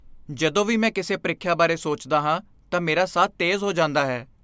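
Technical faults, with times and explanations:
Nothing to report on this speech recording; no technical faults found.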